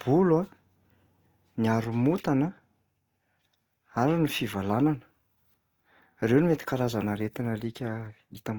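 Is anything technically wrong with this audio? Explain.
Yes. Opus compression runs throughout the speech, likely at a rate near 24 kbps in its CELT mode. Short of bits, the codec fills bands with folded or noisy content instead of leaving gaps, so the speech sounds grainy and rough rather than swirly as with MP3, with content still reaching about 20.1 kHz.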